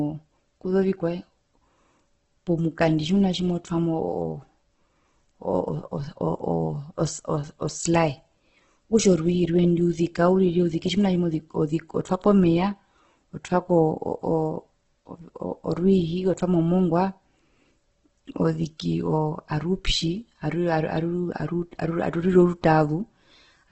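Heavy Opus compression, likely at a very low rate, around 12 kbps, runs through the whole clip. Starved of bits in its music mode, the encoder keeps each band's overall energy but rebuilds the detail by folding lower bands upward or filling them with noise, and it narrows the bandwidth so nothing survives above about 8.2 kHz. The speech comes out dull at the top, with a rough, grainy texture throughout.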